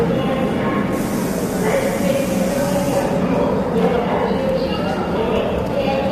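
Throughout, the sound is rough and grainy, with noise filling gaps in the tonal detail, likely from low-delay AAC compression, AAC-ELD, at a rate fitting about 32 kbps.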